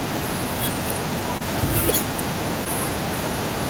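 At 1.37 s, a short concealed packet loss leaves a brief smear in the speech. About 20 ms of audio arrived too late to decode. The receiver extended the preceding sound to cover the gap, then blended back. The same thing happens at 2.64 s, heard as a brief wobble.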